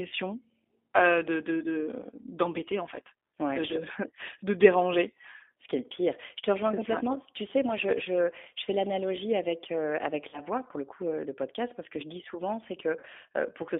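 The whole clip runs through a G.729 codec, and the damage is easy to hear. At 8 kbit/s the speech is rebuilt from a vocal tract filter, a pitch predictor and a handful of pulses per frame, so it comes out rough and a bit synthetic. The line band sits at roughly 250 Hz to 3.6 kHz, which leaves it thin and boxy with no top end at all.

At 10.29 s there's a dropout of about 40 ms, which fits two lost 20 ms packets. The decoder covered it by stretching its last pitch and filter and fading the gain, so you get a short smear of stretched sound instead of silence, and the sound stays weak until about 10.42 s while the frames rebuild. The same thing happens at 12.99 s, again about 40 ms lost, with the weak recovery lasting to around 13.06 s.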